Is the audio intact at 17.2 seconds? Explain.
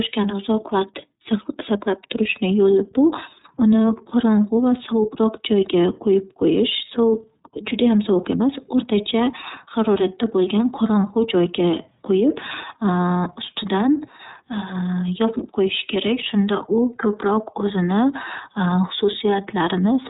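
No. At 17.2 s the speech carries iLBC codec damage, present throughout the clip. Each roughly 30 ms frame is coded on its own, so voicing sounds plainly rough and synthetic. On a spectrogram, energy stops flat near 3.8 kHz, with nothing above.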